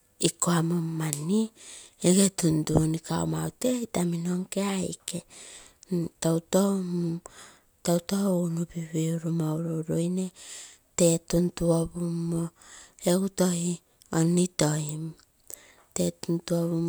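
No technical faults are audible anywhere in this recording.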